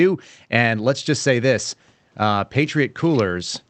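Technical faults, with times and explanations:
No technical faults; the room noise sits about 45 dB under the speech, and the top end stops near 8 kHz, consistent with an Opus call path working as intended.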